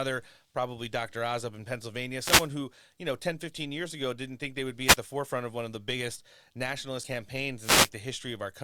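Between 2.17 and 2.50 s, after "up in" and before "who you know", a wireless microphone noise hit brings a swish of static as the radio signal fades under cancelling reflections and receiver noise rises over the speech. A shorter one follows at 4.85 to 4.97 s, between "think they would be" and "the forefront of one", and another at 7.61 to 7.90 s.

At 7.03 to 7.08 s, compressed frames are skipped. A couple of frames never play, and the speech jumps ahead by about 40 ms, which fits 20 ms frames.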